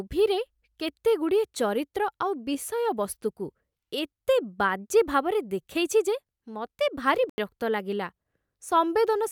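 It's a speech clip with a corrupt frame muted at 7.29 to 7.38 s: a clean, abrupt drop to silence lasting about 0.09 s, which fits a couple of compressed frames that got bit-flipped, were rejected by the decoder, and were filled with silence while timing stayed intact.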